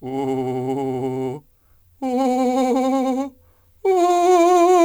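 Crude rate conversion runs through the piece: samples dropped, fitting 48 kHz to 44.1 kHz, leaving a gritty, inharmonic fizz on loud, bright passages.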